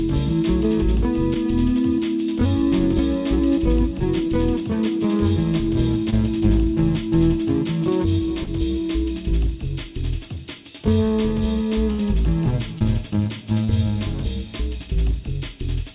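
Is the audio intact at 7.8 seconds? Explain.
Yes, at 7.8 seconds the audio is intact, with no dropout, glitch or distortion, only the narrow band, with nothing above 4 kHz, that fits a G.711 call path.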